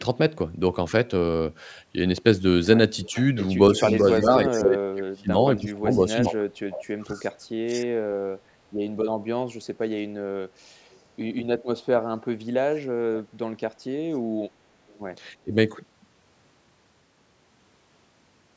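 From 3.04 to 4.01 s a faint copy of the speech trails it by about 0.3 s, roughly 20 dB down. This is an echo leak, likely from a loudspeaker pickup the echo canceller failed to remove. From 4.04 to 7.95 s the speech dips in pieces, by as much as about 30 dB and for around two seconds in total. That is speech suppressed in double talk, likely because the canceller turned down both its own talker and the loudspeaker echo while they overlapped. A brief echo scrap returns at 4.56 s, then fainter ones at 10.91 s (about 40 dB down) and 14.88 s (about 35 dB down). The speech drops again from 12.6 to 13.24 s, losing about 30 dB over roughly 0.4 s, and briefly at 15.4 s, losing about 25 dB.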